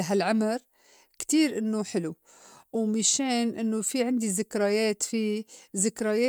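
No technical faults are audible.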